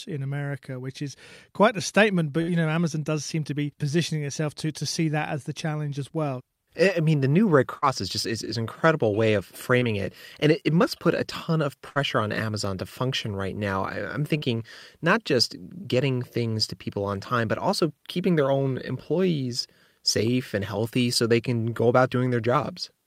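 Speech with two kinds of network dropout. There are three bursts of packet loss, at 2.41 to 2.49 s, 7.77 to 7.89 s and 11.89 to 11.98 s. In each one the receiver stretches the last sound for roughly 50 to 60 ms as a fading buzz or hiss, then jumps ahead past about 40 to 60 ms of audio that never arrived. There's also some short concealed packet loss, a 20 ms hole at 9.79 s and a 40 ms one at 14.38 to 14.44 s. Those got patched by continuing the last sound and blending back in, so you hear a quick smear or wobble rather than a gap.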